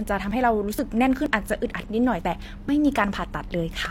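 At 0.31, 0.79, 1.26, 1.74, 2.69 and 3.16 s the speech skips forward. Each jump drops roughly 30 ms. The two sides meet with no gap. The steady spacing points to audio missing between chunks, likely from processing in half-second blocks.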